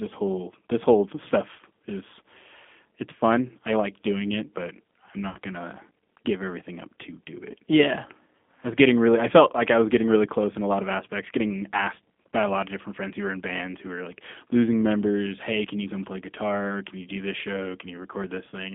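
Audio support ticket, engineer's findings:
G.729 codec throughout: speech squeezed through a low-rate model that sounds like 8 kbit/s. Band limited to 200 Hz–3.5 kHz, plainly rough, synthetic texture.

VoIP packet loss concealed by the speech codec, 5.29–5.37 s and 7.52–7.55 s: decoder extrapolates missing audio. Stretched, fading smear, about 60 ms and 20 ms, fitting three 20 ms packets and one.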